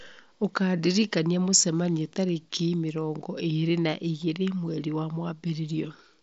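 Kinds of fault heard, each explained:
The speech comes through a wideband Bluetooth mSBC headset link, so the band stops near 7.7 kHz, and no faults are present.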